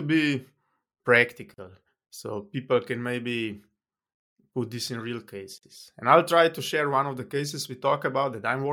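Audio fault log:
1.54–1.58 s and 5.58–5.63 s, gap at a join of encoded pieces: the speech drops into silence for 40 ms just before "so people can maybe", then for 49 ms right after "put this in real". Both gaps have edges smeared by the codec, and the sound resumes where it stopped. The 4.0 s spacing suggests separately encoded 4 s pieces joined untrimmed, leaving each piece's encoder start delay and final-frame padding in place.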